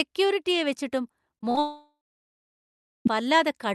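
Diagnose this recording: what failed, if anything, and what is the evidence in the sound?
Network stage, repeated packet loss (robotic sound): from 1.35 to 1.58 s the speech turns choppy and robotic. Six short gaps, the longest 30 ms, were patched by stretching the preceding audio, so about 43% of that span is concealment rather than real signal.

Network stage, long network dropout: from 1.6 to 3.11 s the concealed sound decays into about 1.1 s of silence, and roughly 1.46 s of audio never returns. This is likely an extended loss of incoming packets, with the receiver filling until concealment gave out.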